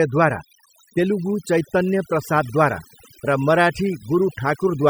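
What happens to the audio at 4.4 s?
At 4.4 s the clip is still under the overdone noise removal that runs through the whole recording. A noise reduction stage was pushed too hard, so it drives individual frequency bands down or out whenever they sit close to its idea of the noise floor, and the softer parts of the speech get taken along with them. The gaps fall to near silence speckled with twinkling artefacts.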